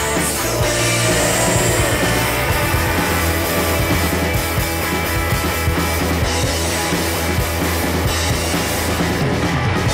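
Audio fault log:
0.79–4.07 s, doubled audio track: a second full-band copy of the sound trails the original by about 150 ms, roughly 5 dB quieter. It has no decay or room colour and cuts in and out abruptly, likely from a slower second capture path mixed back in.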